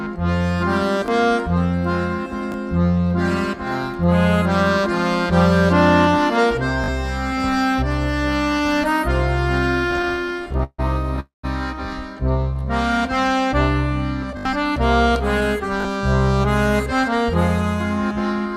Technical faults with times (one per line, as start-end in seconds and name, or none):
1.06-1.08 repeated buffer
2.52-2.54 repeated buffer
6.84-6.88 repeated buffer
9.91-10.80 repeated stalls (stutter)
11.20-11.45 call audio freeze
12.54-12.99 jitter buffer slow-down
14.37-14.45 repeated buffer
15.81-15.85 repeated buffer